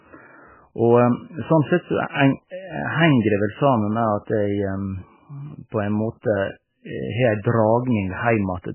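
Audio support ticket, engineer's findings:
Speech band-limited for the full clip. Nothing above 3 kHz. Sibilants dull, top end gone. Watery, swirly texture throughout. Onsets smeared. Likely cause: MP3 compression, heavily starved. Encoder cut treble at a fixed point and dropped weak frequency lines. Those lines flicker frame to frame, hence the swirl. Damage level points to a bitrate near 8 kbps.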